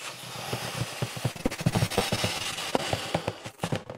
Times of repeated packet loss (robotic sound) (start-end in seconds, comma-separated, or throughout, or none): 1.31-2.82, 3.51-3.91